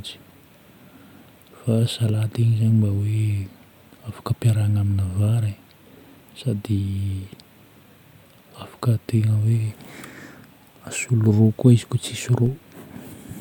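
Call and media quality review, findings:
DC step at 12.46 s: zero line of the speech waveform jumps by about -30 dBFS, then drains away through a roughly 5 Hz high-pass. Points to converter recalibration or an offset input switching in. Heard as a single low thump or click near the end.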